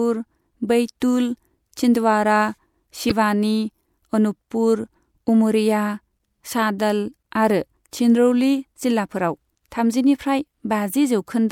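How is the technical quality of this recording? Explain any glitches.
One glitch stands out in the speech. From 3.09 to 3.12 s there is a brief burst of damaged data in the compressed stream. Some bytes in that stretch were corrupted. The decoder misread those frames and lost sync until the next valid header. The result is a short glitch in the sound.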